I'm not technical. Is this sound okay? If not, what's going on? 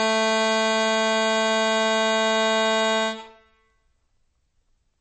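No. The music has most likely been squeezed hard by MP3 compression, which throws away detail it judges least noticeable in order to make the file small. Here it has been squeezed so far that the damage is plainly audible for the whole clip: everything above about 8.3 kHz is gone, so the top end sounds dull and muffled, and the remaining sound has a watery, swirling quality, with sharp hits and attacks smeared.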